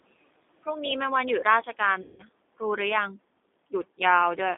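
The whole clip has the G.729 codec's narrow 250 Hz to 3.7 kHz line band and plainly audible rough, synthetic texture, consistent with its 8 kbit/s model-based rebuild. The room noise sits about 21 dB under the speech and warbles through it. From 2.02 to 2.22 s, VoIP packet loss concealed by the speech codec stretches the last sound into a fading buzzy tone or coloured noise, and the sound stays weak briefly afterward.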